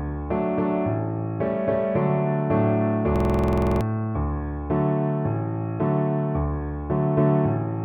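From 3.16 to 3.81 s the audio locks into a system hang loop: a 46.44 ms slice repeats 14 times at 21.5 Hz, giving a rapid rattling stutter. That fits a 2048-sample buffer cycling while the system froze, dropping about 0.7 s of sound.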